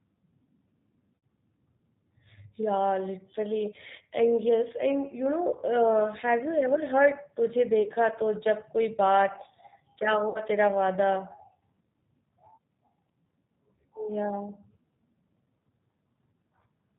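Speech coded with G.729 at 8 kbit/s sounds plainly rough and synthetic throughout. Nothing passes above 4 kHz, and the pulse-based excitation gives a buzzy, dull edge rather than the gurgling smear of a transform codec. VoIP packet loss concealed by the speech codec appears at 1.17–1.26 s, 7.83–7.91 s and 10.29–10.41 s, where about 60, 30 and 60 ms of audio went missing. The decoder stretches the last sound into a buzzy tone or coloured noise that fades instead of leaving silence or a click, and the voice stays weak briefly after each gap.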